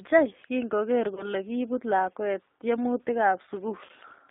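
Throughout, the speech passes through a G.729 codec, which fits an 8 kbit/s encoding. It is rebuilt from a filter and sparse pulses and confined to a 250 Hz to 3.7 kHz band, so it sounds plainly rough and synthetic. At 1.15 to 1.29 s, just before "kibuut lakwet", VoIP packet loss concealed by the speech codec leaves a gap of about 20 ms, which fits one lost packet. The decoder extends its last frame into a fading buzzy tone or coloured noise, and the voice stays weak for a while afterwards. At 3.85 to 3.91 s, a 40 ms loss, likely two packets, is concealed the same way.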